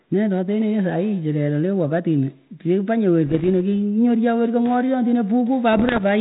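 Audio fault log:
3.27 to 3.49 s and 5.73 to 6.00 s, bit errors on an ADPCM link: pops, rough bursts, level jumps. Each flipped bit derails the decoder's step size and predictor briefly.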